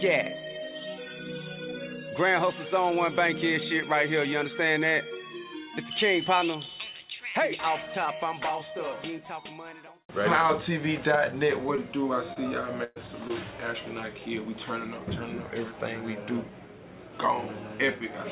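Short concealed packet loss occurs at 11.76 to 11.79 s, 12.33 to 12.38 s and 13.28 to 13.31 s. Each time, about 20 ms of audio arrived too late or not at all, and the receiver covered the hole by extending the preceding sound for roughly 13, 26 and 16 ms before blending back into the real signal. Each one is heard as a brief smear or wobble in the 4 kHz-limited call audio.

A burst of packet loss runs from 12.84 to 12.98 s, between the second and third short losses. About 120 ms went missing in a row. The receiver spun the last sound forward for about 117 ms, lowering its level as the gap lengthened, so a held buzz or fading hiss replaces the real audio. The sound then resumes further along, with the stretch in between gone.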